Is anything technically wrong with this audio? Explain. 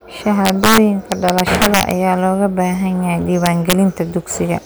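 Yes. Integer overflow occurs from 0.45 to 1.91 s and again from 3.46 to 3.73 s in this speech clip. Where the signal was pushed past the largest value the integer format can hold, about 5 dB too hot in the first stretch and about 2 dB in the second, the peaks wrap around to the opposite sign instead of being limited. Each wrapped peak jumps across the full range, producing violent cracks far harsher than ordinary clipping.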